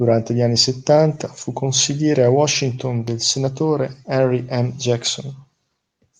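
No technical faults are audible.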